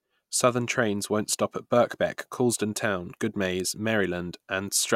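No technical faults are audible.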